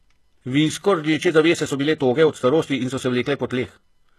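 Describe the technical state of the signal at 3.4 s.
At 3.4 s the audio sits inside a time-stretched section running from 1.15 s to the end. It plays at 1.5 times speed while the pitch holds, so the pace sounds abruptly rushed, likely because software dropped short pieces to shorten it.

The whole clip also shows plainly audible HE-AAC compression damage, with nothing above 12.3 kHz. The upper band is rebuilt from copied lower bands, so its harmonics do not line up with the lower ones. This likely points to a low bitrate around 16 kbps.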